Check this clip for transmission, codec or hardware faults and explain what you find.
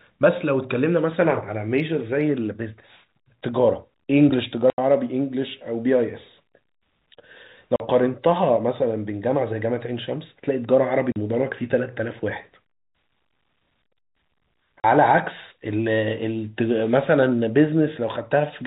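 The clip has one transmission fault. Packet loss filled with silence occurs at 4.70–4.78 s (80 ms), then 7.76–7.80, 11.12–11.16 and 14.80–14.84 s (40 ms each). Missing packets were replaced by silence, so the speech drops out abruptly with hard edges. The gap lengths fit a 20 ms packet size. The G.711 telephone band limit at 4 kHz is audible and is expected for that format.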